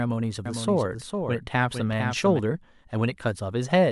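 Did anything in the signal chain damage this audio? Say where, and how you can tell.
Yes: a doubled audio track runs from 0.46 s to 2.40 s of this speech. A second, full-band copy trails the original by about half a second, a few dB quieter, with no decay or room colour, so it isn't an echo from a space. It switches on and off abruptly at those two times. That points to the driver or buffer stage, the sound most likely captured twice through a second, slower input path and mixed back in.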